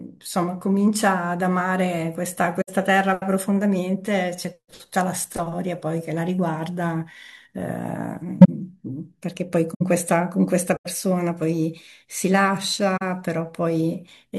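Speech with 17 corrupt frames concealed across five spots, at 2.61–2.69, 8.41–8.49, 9.74–9.81, 10.74–10.86 and 12.97–13.02 s. The decoder patched the damaged AAC frames, so the spectrogram shows soft-edged dips or smeared bands.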